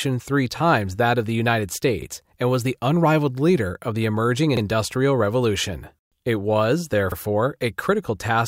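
At 2.02 s the speech stutters briefly. The same thing happens at 4.57 s and again at 7.12 s. Each time, a 50 ms slice of audio plays twice. This is the overlapping chunks fault. The audio was handled in blocks of about 2.5 s, and each new block began before the previous one had finished. The overlap at every join is heard as a repeat. It comes across as a small click or hiccup at a steady rhythm.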